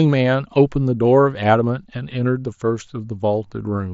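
Nothing goes wrong in this bit of speech; it just sounds like what you'd expect from a Bluetooth headset on the mSBC codec, with the bit of light graininess that codec tends to bring along.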